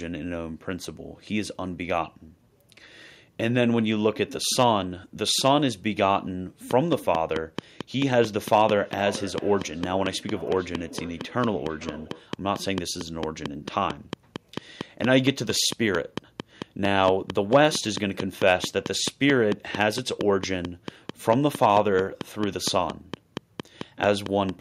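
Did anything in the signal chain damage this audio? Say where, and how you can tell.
Yes. A train of clicks runs from 6.71 s to 24.50 s, about seventy in all. They arrive regularly, 4.4 per second, as near-identical pops up to about 15 dB above the speech. They persist through pauses. The likely source is interference pickup in the analogue wiring or a faulty connection or power supply.

A feedback echo between two devices appears from 8.79 s to 12.35 s. This is a call-processing fault. Speech returns roughly every half second, thinner and ringier, peaking about 17 dB below the talker. A second device replays this microphone's audio, and neither echo canceller removes it.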